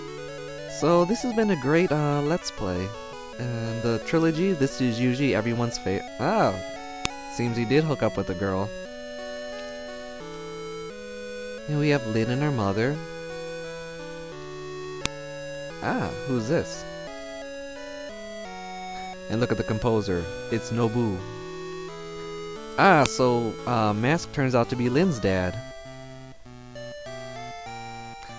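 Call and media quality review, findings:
File header played as audio at 7.05, 15.06 and 23.06 s: sharp click at each 8 s boundary. Stream assembly or concatenation step leaves each WAV chunk's header in place, so those bytes play as samples. Strip headers before joining.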